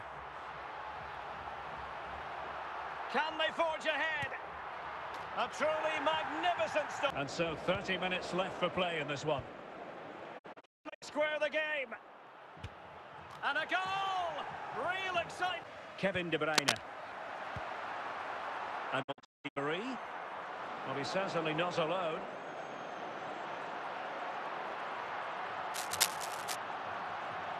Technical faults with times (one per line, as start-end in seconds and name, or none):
10.37-11.04 digital broadcast dropout
16.46-16.83 cable scratch noise
19.01-19.58 digital broadcast dropout
25.74-26.56 cable scratch noise